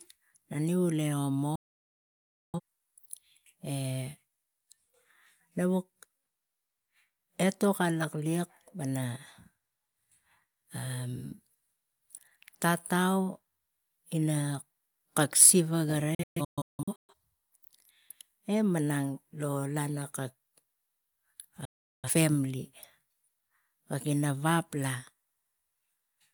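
A digital broadcast dropout strikes this speech recording three times. Each time the receiver stopped getting decodable frames and muted until clean ones resumed, so the sound cuts to silence within about 3 ms and whatever was sent meanwhile never returns. The first gap runs from 1.55 to 2.60 s, losing about 0.98 s. The second spans 16.15 to 17.13 s, where about 0.64 s disappears in several short holes, the longest 0.17 s. The third runs from 21.65 to 22.10 s, losing 0.38 s.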